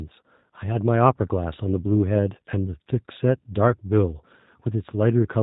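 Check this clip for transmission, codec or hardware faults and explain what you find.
One codec fault runs through the whole clip. G.729 codec damage, throughout: the speech is rebuilt from a vocal tract filter, pitch predictor and sparse pulses, consistent with 8 kbit/s G.729A, so it sounds plainly rough, synthetic and dull, with nothing above 4 kHz.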